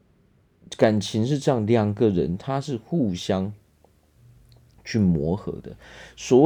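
From 0.95 s on, there's video or display buzz: a screen or video cable leaks a 75 Hz buzz plus hash, roughly 40 dB below the speech.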